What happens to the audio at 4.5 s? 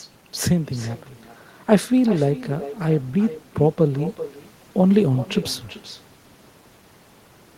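At 4.5 s the speech is shadowed by a quieter, thinner copy of itself that arrives somewhere around 0.4 s later and sits about 15 dB below the direct sound. This is echo with no canceller, and it runs through the whole clip rather than appearing only at that moment. The far end is playing the call over a loudspeaker, its microphone picks that playback up, and nothing removes it, so the talker's own sound returns after the network round trip.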